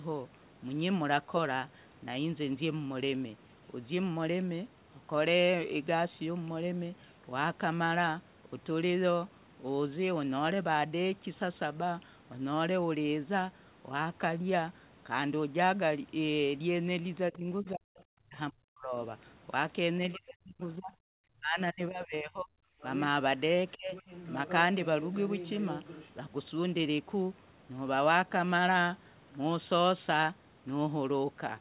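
From 17.31 to 18.94 s, speech suppressed in double talk drops the talker by up to about 40 dB across roughly a second and a half, likely because the echo canceller could not separate the talker from the loudspeaker echo and turned both down. The waveform shows the envelope collapsing into gaps, and the spectrogram goes nearly blank in those columns.

Inside that dip, from 17.34 to 18.03 s, the other side's voice leaks through at about 30 dB below the speech. It is likely residual loudspeaker echo and sounds like a faint second voice. On the spectrogram it appears as weak harmonic traces.

A 40 ms scrap of leakage at 20.14 to 20.18 s, about 20 dB down, likely comes from loudspeaker echo that was not fully cancelled. From 20.15 to 20.94 s the talker is pulled down by about 35 dB, and the waveform narrows sharply.

From 21.25 to 22.52 s another suppression of about 35 dB, likely the same double-talk clamping, pulls the talker down.

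From 23.68 to 26.11 s the other side's voice leaks for longer at about 15 dB below the speech, likely echo that was not fully cancelled. On the spectrogram a second, fainter set of harmonics overlaps the talker's.

Within that stretch, 23.76 to 23.94 s brings a brief suppression of about 30 dB, likely from the canceller reacting to the double talk. It shows as a short notch in the waveform.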